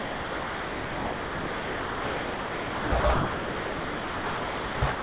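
Speech, band-limited to nothing above 4 kHz by a narrowband call path. It repeatedly gives way to steady, even hiss from 0 to 2.92 s, 3.0 to 3.04 s, 3.14 to 4.82 s and 4.92 to 5.02 s, which is most likely sound dropped by the voice detector, with comfort noise filling in. Unlike packet-loss concealment, these stretches carry no smeared or repeated fragments of speech, just a flat noise bed, and only three brief bursts of real sound, 0.08 to 0.1 s each, survive between them.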